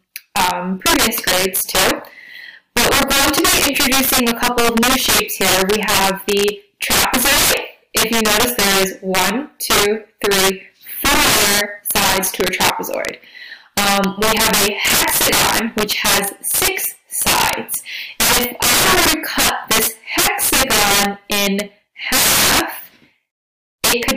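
The audio suffers from integer overflow throughout, with the signal driven about 18 dB past full scale. Around seven percent of samples exceed the limit, and instead of being held at the ceiling each one wraps to the opposite extreme, producing harsh, violent cracks on every loud passage. A waveform shows peaks snapping from top rail to bottom rail in vertical jumps, while a spectrogram shows bright broadband vertical streaks at each wrap.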